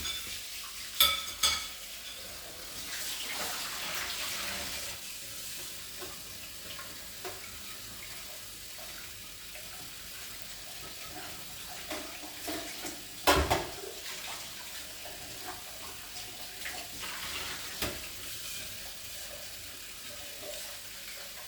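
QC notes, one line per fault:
1.31 s, dropped buffer (overrun): the audio skips ahead by a few milliseconds, likely samples overwritten before being read, leaving both sides joined.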